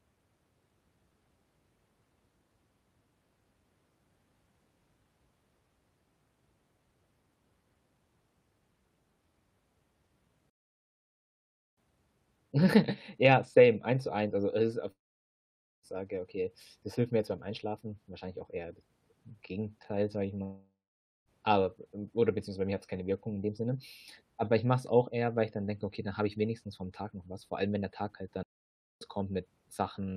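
A playback stall at 10.50 s stops the speech mid-flow for about 1.27 s, likely because the player ran short of data or was blocked, before it carries on at 11.78 s. A long network dropout at 14.91 s follows, likely from audio packets failing to arrive: the last sound is drawn out as a fading buzz that gives way to near silence, and the speech returns at 15.86 s with about 0.92 s missing. The second long network dropout, at 20.43 s, is likely the same kind of loss, with the same fading fill and quiet gap and about 0.84 s gone before the speech resumes at 21.29 s. Another playback stall at 28.43 s halts the sound for about 0.58 s, likely from the same data shortage, and it resumes at 29.01 s.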